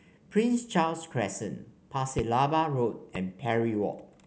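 Loud pops at 2.19–2.21 s and 3.15–3.18 s, the first clearly louder, are likely voltage spikes from static or a switch. Unlike dropouts, speech continues underneath each sharp thump.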